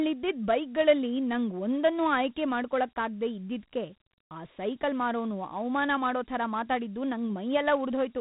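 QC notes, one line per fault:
Throughout: Dialogic VOX ADPCM. Gritty hiss follows the speech, nothing above 3.9 kHz; coarse 4-bit step coding, which fits 32 kbps at 8,000 samples a second.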